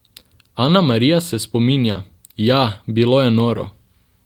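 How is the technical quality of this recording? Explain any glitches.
One glitch: a short concealed packet loss at 1.91 to 1.98 s. About 40 ms of the speech stream arrived too late for the decoder, which extended the preceding sound across the gap and crossfaded back, leaving a brief smear or wobble.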